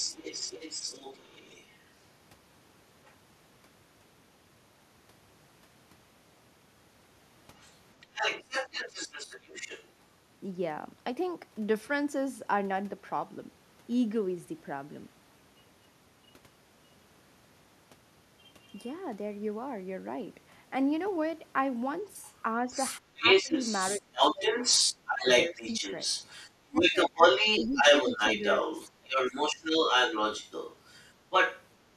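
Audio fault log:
0.00–1.79 s and 7.58–9.88 s, other side's voice leaking through: a second voice sits only a little below the talker. This is likely loudspeaker pickup that the echo canceller left behind, and unlike double-talk suppression, the talker's own level stays steady.
3.05–3.14 s and 18.78–18.90 s, other side's voice leaking through: brief, faint scraps of a second voice, far below the talker. These are likely short residues of loudspeaker echo the canceller missed. They add sound rather than removing it.
22.26–31.64 s, other side's voice leaking through: a long stretch where the second voice is as loud as or louder than the talker, likely because the canceller failed to remove the loudspeaker echo from the microphone for this whole span.
22.65–25.67 s and 26.68–29.57 s, speech suppressed in double talk: while the far voice is present, the talker's own voice drops by up to around 20 dB in pieces, about a second's worth in each span. 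The likely cause is the canceller turning down both sides at once. It takes sound away rather than adding it.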